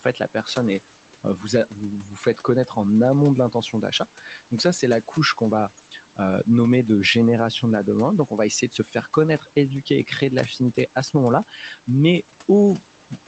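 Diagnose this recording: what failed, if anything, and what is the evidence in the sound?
Noise suppressor artifacts run through the whole recording, at the call-processing stage. The background sinks by about 12 dB between phrases and rises again under the speech. The suppressor is attenuating bands it classifies as steady noise, frame by frame.

Speech cut by the noise suppressor appears at the start, from 0.0 to 0.46 s. Parts of the speech sound swallowed, dipping by up to about 9 dB across roughly a tenth of a second in total. The suppressor misread the start of speech as noise and turned it down with the background.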